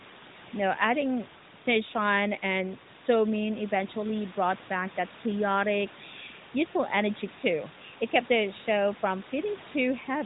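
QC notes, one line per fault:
Nothing stood out on listening to this speech.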